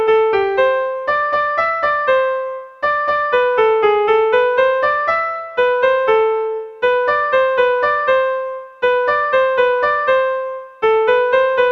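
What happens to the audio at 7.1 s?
Nothing goes wrong at 7.1 s; the audio runs through that moment intact, with no dropout, click or other fault.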